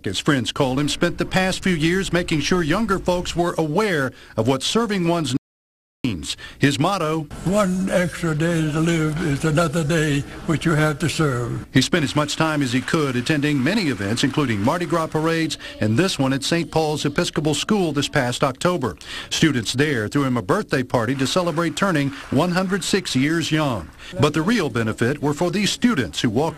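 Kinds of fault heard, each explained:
Audio dropout to silence: from 5.37 to 6.05 s the sound stops dead mid-flow and then resumes just as abruptly, leaving about 0.68 s of silence with no room tone underneath. The likely cause is a brief loss of the input signal, such as a dropped connection or momentary mute, while recording carried on writing zeros. On a waveform this shows as a flat line at zero; on a spectrogram, a fully black vertical band with hard edges.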